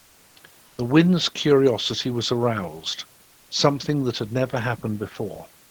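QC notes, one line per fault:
0.00–0.35 s and 3.23–3.49 s, comfort noise in place of the background: likely discontinuous transmission halts sending in pauses, so steady featureless noise, about 1–2 dB quieter, replaces the textured room noise.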